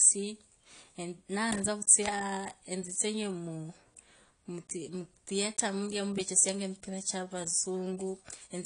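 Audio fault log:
Throughout, AAC compression: the speech is band-limited with nothing above 10.1 kHz, so sibilants lose their top end and sound dull, and the codec damage is plainly audible as a smeared, warbling texture on sustained sounds. This is likely low-bitrate AAC-LC, whose encoder lowers the cut-off and quantises the remaining frequency lines coarsely against a hearing model, leaving gaps that waver from frame to frame. The degree of damage fits a bitrate around 32 kbps.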